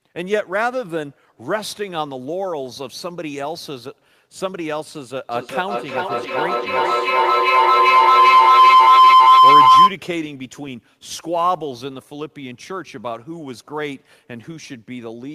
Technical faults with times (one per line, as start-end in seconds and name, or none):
0.00-15.35 sample clock jitter
5.31-9.97 feedback howl